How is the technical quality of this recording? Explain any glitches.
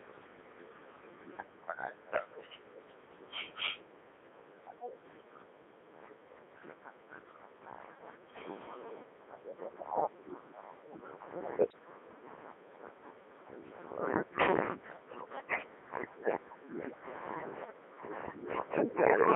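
The technical quality is poor. The whole recording has been through a very low-rate digital voice codec, and one brief burst of transmission errors corrupts it further.

Codec 2 vocoder, throughout: Rather than preserving the waveform, the encoder sends only pitch, voicing, level and a coarse spectral envelope, and the decoder rebuilds speech from sine waves. The sound points to the 3.2 kbit/s mode. Heavy damage leaves speech robotic and buzzy, confined to roughly 300 Hz to 3.6 kHz.

Bit errors on digital voice radio, 11.70 to 11.79 s: Flipped bits, at a rate of a few percent, reached the vocoder. Each corrupted bit misdirects the pitch, level or spectrum of a whole frame, which fits a few damaged frames. The voice briefly lurches in pitch and tone and breaks into a warbling, bleeping garble.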